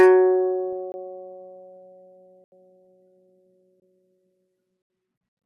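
Music, with DAB burbling at 0.73 s: a few brief watery blips of noise in MP2 sub-bands. It points to a small fraction of bit errors getting past error correction, corrupting samples. Unlike a gap, the sound keeps going, just garbled. Blocks of digital silence follow at 0.92–0.94 s and 3.80–3.82 s (20 ms each), and at 2.44–2.52 s and 4.82–4.90 s (80 ms each). The audio drops to silence with no fade. This is the kind of gap left when an output buffer isn't filled in time.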